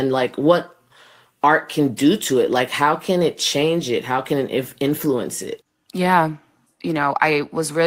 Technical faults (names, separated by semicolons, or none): none